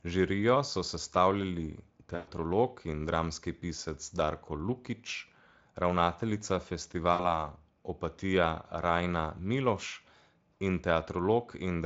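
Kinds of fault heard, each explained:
VoIP packet loss concealed by the speech codec: packets carrying the speech stopped arriving, and the decoder covered each gap by extending its last pitch and spectral envelope while lowering the gain frame by frame. At 2.15 s about 120 ms goes missing, heard as a fading smear until 2.29 s. At 7.13 s a shorter 60 ms loss leaves the speech weak or distorted until 7.47 s while the Speex decoder's state recovers.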